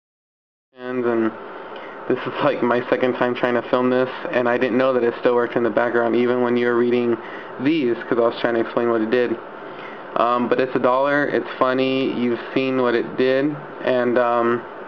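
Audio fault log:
No faults found; the level rises in a smooth, edited fade-in from about half a second to 1.16 s, with no click or hard edge.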